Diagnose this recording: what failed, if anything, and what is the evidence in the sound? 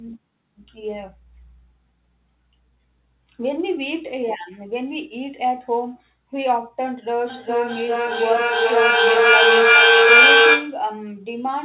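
A feedback echo between two devices in the same room breaks the call processing from 7.29 to 10.86 s: one device's loudspeaker feeds the other's microphone, beyond either echo canceller's reach. The speech returns roughly every 0.4 s, thinner and ringing, building to about 10 dB above the speech.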